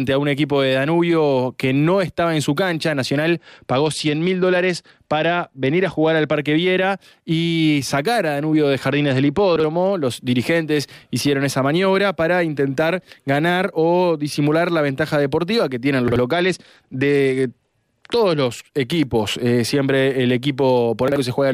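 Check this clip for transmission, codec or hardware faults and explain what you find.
Two kinds of fault turn up: three Bluetooth SBC bit pool drops and three chunks out of order.

Bluetooth SBC bit pool drop, 3.38 to 6.33 s, 8.91 to 9.93 s and 16.32 to 18.46 s: the link congested and the sender cut its SBC bit pool, which fits a fall from 31 to 12, near 88 kbps. Starved upper sub-bands make the treble go dull while gritty quantisation noise rises until the rate recovers.

Chunks out of order, at 9.56 to 9.64 s, 16.08 to 16.16 s and 21.08 to 21.16 s: in each case a block of about 40 ms was written one block late, so it plays after its successor. Nothing is lost, but the reordered splices give a brief jumbled stutter.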